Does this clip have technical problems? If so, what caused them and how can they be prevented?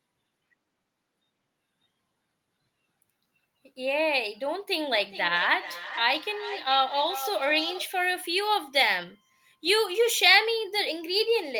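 Yes, there's feedback echo between two devices from 4.92 to 7.98 s: the speech comes back roughly every 400 ms, peaking about 11 dB below the talker, because one device's mic hears the other's speaker. Keep only one device joined per room, or use headphones.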